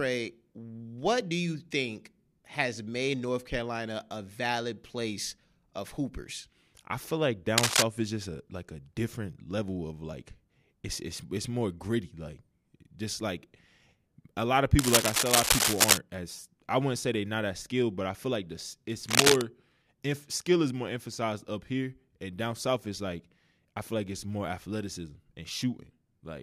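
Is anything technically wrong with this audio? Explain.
Yes. Cable scratch noise appears three times: 7.58 to 7.83 s, 14.79 to 15.98 s, and 19.09 to 19.42 s. Dense, uneven scratching sits over the speech, roughly 5 dB louder than it. A worn cable or connector being moved is the likely cause.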